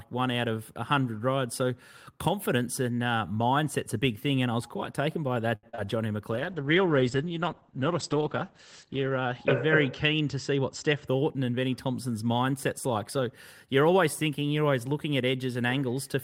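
Right after "was quite taken by", at 5.55 s, the sound hangs for a moment, held slightly too long until 5.65 s. This is a short stall from a late packet. The packet was not there on time, the jitter buffer ran dry, and the receiver stretched the last sound for 77 ms. It then resumed exactly where it had paused, so nothing was lost, only delayed.

A brief smeared wobble follows from 5.69 to 5.75 s, and then a second one from 5.75 to 5.80 s. Both are short concealed packet losses. In the first, 80 ms of audio never arrived in time, and the receiver bridged the gap with 39 ms of extrapolated sound. That also trimmed about 40 ms off the delay the stall had built up. In the second, 20 ms went missing and was covered by 25 ms of synthesised continuation before blending back into the real signal.

From 5.86 to 6.10 s the speech drags, at the same pitch but drawn out, running at 88% speed. This is a jitter buffer slow-down. 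With its reserve depleted after those gaps, the receiver repeated pitch periods and slivers of pause, adding 37 ms to rebuild the buffer.

From 6.33 s the sound turns rough and watery and loses its brightness, staying that way until 11.13 s. This is a call bitrate drop. The bandwidth estimate fell, and the encoder went from 32 kbps to 10 kbps, holding the lowest rate for 2.8 s. At that rate it also narrowed the audio band from 20 kHz to 8 kHz, which removes the crisp top end and gives the muffled, coarse texture.

Overlapping the tail of that, from 10.51 to 11.40 s, the speech sounds hurried while the pitch stays unchanged, running at 108% speed. This is a jitter buffer speed-up. The buffer was holding more audio than its target, so the receiver cut out short pitch-period pieces one after another, removing around 70 ms to bring the delay back down.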